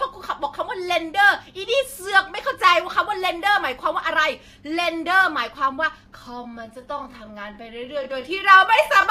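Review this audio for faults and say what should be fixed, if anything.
Time-stretched section from 6.11 s to the end at 9.1 s: the speech suddenly slows to about 0.7 times its pace while the pitch holds steady, so it drags. This is likely software stretching the audio to fill a length, repeating short slices to keep the pitch unchanged. To prevent it, edit or trim the material to the required duration instead of letting software stretch it, or keep any tempo change small and apply it evenly.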